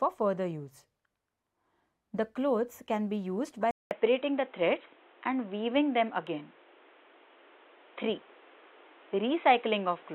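At 3.71 s the sound drops out for about 200 ms, then returns duller and boxier until the end, with nothing above 3.9 kHz, a level shift of a few decibels and new background noise roughly 30 dB below the signal. This is likely an input switched to a poorer device. On a spectrogram the upper band is cut off flat after a narrow blank gap, and the waveform shows a brief flatline followed by a changed envelope and a raised noise floor.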